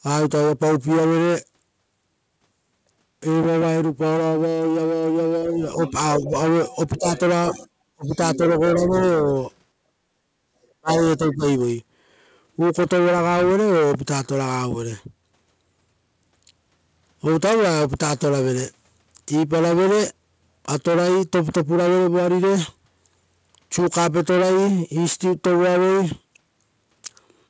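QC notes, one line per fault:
5.54–6.36, 6.98–7.06, 7.5–9.45 and 10.8–11.43 s, speech suppressed in double talk: The talker drops in level each time the far side is talking too. It's shallow at first, around 5 dB, and a brief 15 dB dip near 7.0 s. Then it goes deep, about 30 dB for roughly a second inside the 7.5–9.45 s stretch and again at 10.8 s. That's likely the echo canceller failing to separate the local voice from loudspeaker echo and ducking both.
5.87–5.91, 6.72–7.53 and 8.05–8.38 s, other side's voice leaking through: A second voice slips in underneath. First there's a short scrap about 20 dB down. Then a longer stretch of almost a second only about 10 dB below the talker, and another piece around 15 dB down. These sit right alongside the double-talk dips, which is what you'd expect if the likely cause is loudspeaker playback the canceller didn't fully subtract from the mic.
10.08–10.52 s, background gated by the echo canceller: The room sound sags by up to about 13 dB for a bit under half a second and then comes back. 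It's the canceller clamping the mic hard while the loudspeaker plays and releasing once it stops. The band-limited call sound, with nothing above 8 kHz, fits a G.722 path at 64 kbps.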